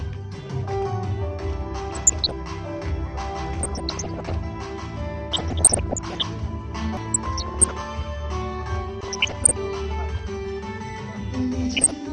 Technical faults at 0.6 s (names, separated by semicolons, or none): MP2 compression